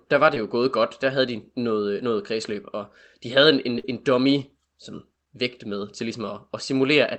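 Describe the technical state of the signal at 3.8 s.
A burst of packet loss at 3.79–3.85 s: about 50 ms was concealed by stretching and fading the previous sound, then audio resumes at "en dummy som vægt" with 50 ms missing.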